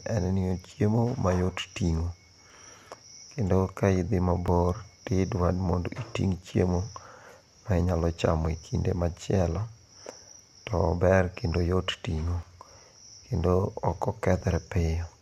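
Skips at 0.51, 2.50, 4.48, 6.47, 8.46, 10.44, 12.43 and 14.41 s come from overlap between stream segments. Overlapping timestamps trim real speech, so the waveform jumps. The steady two-second rhythm, which fits 2-second segments, and the absence of any silent gap set this apart from dropouts.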